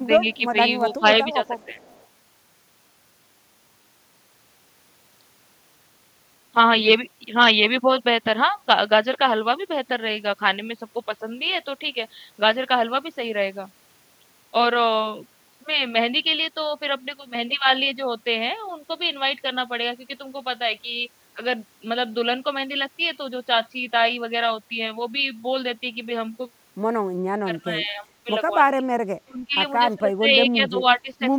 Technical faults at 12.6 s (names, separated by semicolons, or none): none